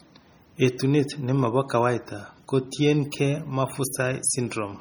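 Throughout the speech, the sound is watery and swirly, with metallic chirps on s sounds and smeared consonant attacks. This is likely heavy MP3 compression: weak frequency lines switch on and off between frames, consistent with a starved bitrate around 32 kbps.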